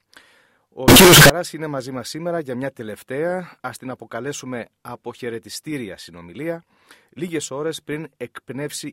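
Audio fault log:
0.88–1.30 s, signed and unsigned mixed up: for about 0.4 s the audio becomes a very loud, harsh distortion in which the quiet moments are as loud as the peaks. The likely cause is 16-bit samples being read with the wrong sign convention, which flips the top bit, so every pass through zero becomes a jump across the entire range and low-level detail becomes as loud as strong sound.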